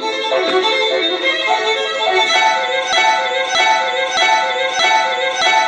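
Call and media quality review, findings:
Broken-record loop, 2.93 s to end of clip. A 0.62 s fragment repeats exactly, back to back, four times, with no recovery. Likely a stalled player or stream buffer resending its last held fragment. Audio due in that span is lost.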